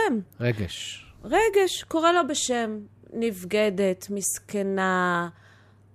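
Nothing in this recording stood out as a technical problem on listening.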